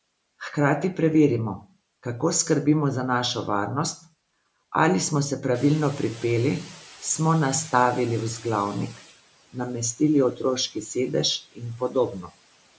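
At 5.54 s, just after "ali smo se", the noise suppressor is caught catching up: the room noise jumps by about 15 dB, and its noise estimate needs 3.58 s to follow. Until 9.12 s the noise comes through too loudly, then sinks by about 13 dB.

From 11.4 to 11.95 s, the noise suppressor mistakes parts of the speech for noise and cuts the speech along with it, by about 17 dB at the deepest. Roughly a fifth of a second of sound is affected, and it comes out faint and swallowed.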